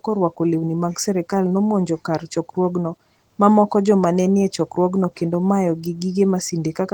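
Throughout the speech, Opus voice compression runs in hybrid mode, with SILK coding the band below 8 kHz and CELT above it, at a rate that points to roughly 16 kbps. The coarsely coded excitation makes the voice plainly hoarse and slightly robotic, though the band reaches 20.2 kHz.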